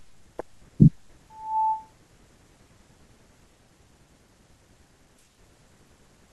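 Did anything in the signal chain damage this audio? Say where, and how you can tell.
Yes. From 1.30 to 1.92 s a pure 876 Hz tone swells over roughly a third of a second to around 10 dB above the speech. That is loudspeaker feedback squeal in the acoustic and analogue loop: the microphone picked up its own loudspeaker, and loop gain exceeded one at that frequency.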